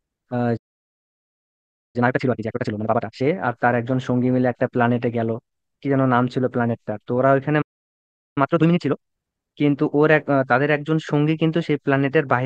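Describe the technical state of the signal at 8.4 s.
At 8.4 s the speech is in a time-compressed catch-up, running from 8.38 to 9.12 s at twice normal speed. The player is working off a backlog by cutting out short slices of the buffered audio and cross-fading the joins. The speech sounds hurried but keeps its normal pitch. That is what sets it apart from a plain speed-up or sample-rate mismatch, where pitch would rise along with tempo.

The catch-up follows a playback stall from 7.61 to 8.38 s: about 0.75 s of silence in mid-flow, likely from the player running out of data or its thread being blocked. The cost of the pause is repaid in the hurried stretch that follows.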